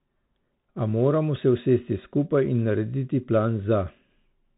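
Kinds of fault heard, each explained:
Bluetooth CVSD headset codec: throughout, the speech is squeezed into a narrow telephone band with nothing above 4 kHz. Each sample is a single up-or-down bit, fitting a 64 kbit/s stream, so s sounds turn scratchy, loud bright moments outrun the step size and distort, and granular hiss sits underneath.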